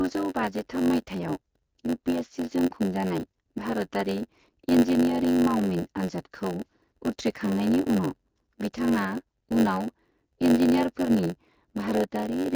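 Block size mismatch (padded) runs through the whole speech clip, start to finish. One stage hands over shorter blocks than the next expects, and each block's shortfall is filled with silence. That repeated gap sets up a buzz at 91.9 Hz, and the speech drags at 0.919 times its proper speed while holding its normal timbre. The HD Voice band limit, with nothing above 7 kHz, stays audible beneath it, at a rate that points to 12.65 kbit/s AMR-WB.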